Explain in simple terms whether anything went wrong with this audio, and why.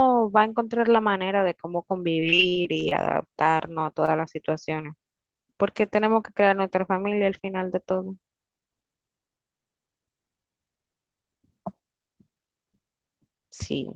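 Two things go wrong in this speech clip, both caused by the network delivering the audio unevenly.

From 2.13 to 2.93 s there is repeated packet loss, which gives a robotic sound. Ten times in under a second, a chunk of audio fails to arrive. Each time, the receiver papers over the hole by continuing the last sound. About a quarter of that stretch is patched-in sound, with the longest hole 36 ms, and roughly 140 ms of real speech never gets through. That is why it sounds choppy.

From 4.06 to 4.09 s there is a short stall from a late packet. Here the audio arrives about 19 ms late rather than getting lost. The player briefly holds the current sound for about 19 ms until it arrives, then carries on from the same point. You hear one tiny stretched moment, but nothing is missing. Unlike the robotic stretch, it happens once and no speech is lost.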